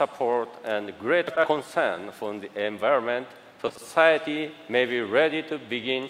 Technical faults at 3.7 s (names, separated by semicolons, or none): frames out of order